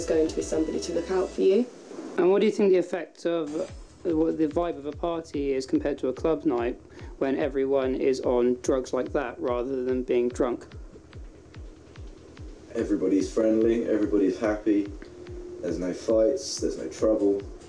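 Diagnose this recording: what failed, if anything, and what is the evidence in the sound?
Nothing in the recording stood out on listening as pointing to a failure at any stage of the chain.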